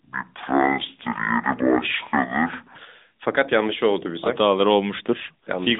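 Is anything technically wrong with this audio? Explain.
Yes. There are two faults.

From the start, the whole speech clip carries AMR narrowband mobile codec damage. This mobile codec rebuilds the voice from a vocal-tract model at a low bitrate, here sounding near 10 kbps. Nothing passes above 3.8 kHz. The voice sounds buzzy, synthetic and thin.

From 0.0 to 2.75 s, a section plays at the wrong speed. It runs at 0.545 times normal speed, so pitch drops by roughly ten semitones. The voice sounds deep and dragging. The likely cause is playback against the wrong clock.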